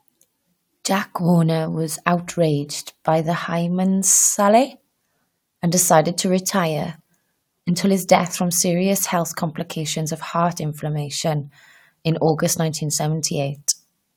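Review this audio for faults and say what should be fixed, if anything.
No faults; nothing needs fixing.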